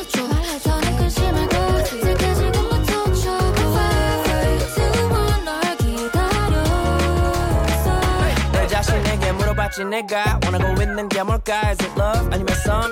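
No technical faults can be heard anywhere here.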